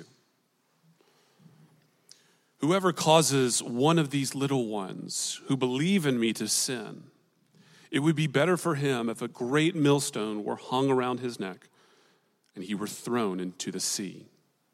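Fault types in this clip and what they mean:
No faults detected; nothing to report.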